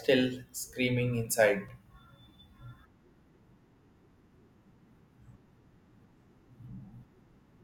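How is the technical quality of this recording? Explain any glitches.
The speech carries one glitch: a tick at 1.68 s, right after "screaming inside". It is a block of digital silence about 4 ms long. For that instant the sound drops out and then returns, with no fade on either side. Because the hole is so brief, it is heard as a single tick rather than an audible dropout. Such a gap typically comes from an output buffer that was not filled in time.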